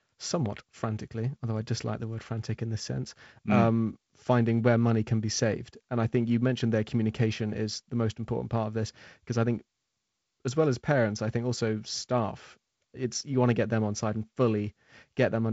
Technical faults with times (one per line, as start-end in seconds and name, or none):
0.46 block of digital silence